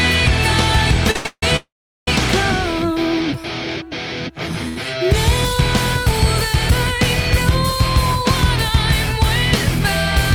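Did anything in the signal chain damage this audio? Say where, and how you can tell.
Yes. The damage happened at the network stage, on the receiving jitter buffer, and shows up in two forms.

Short stalls from late packets occur at 1.11–1.16 s, 1.16–1.26 s and 4.69–4.77 s. Each holds the current sound for 36 ms, 89 ms and 75 ms respectively. The packet arrived after its playout time, so the receiver stretched the last frame until it caught up. Nothing is lost; the timeline simply slips later. A spectrogram shows frozen horizontal streaks where the spectral content stops evolving. The waveform shows identical periods repeating.

Call audio freezes follow at 1.26–1.43 s and 1.56–2.08 s. The first fills 162 ms, with about the last 50 ms silent. The second fills 509 ms, roughly 390 ms of it silent. The sound fades out and then into dead air before resuming where it stopped, which likely comes from packets held up in transit that drained the buffer completely. 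In the waveform the envelope tapers to a flat line, and in the spectrogram a fading smear gives way to an empty band.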